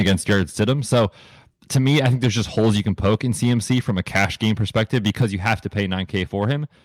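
From the start to 1.05 s, then 1.75 to 3.15 s and 3.42 to 6.53 s, the speech has a harsh, crackly edge on its loudest syllables. That's microphone overload, likely from input gain set about 8 to 10 dB too hot so the peaks flatten against the converter's ceiling. At 0.33 s and again at 5.22 s the microphone volume steps down by 3 dB in one go, likely the call software reacting to that clipping.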